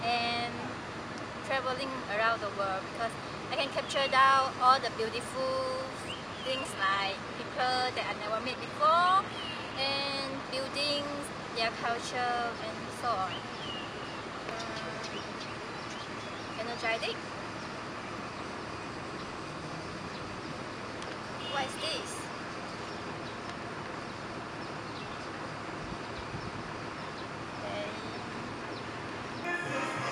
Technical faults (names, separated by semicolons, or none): adaptive stream at a lower bitrate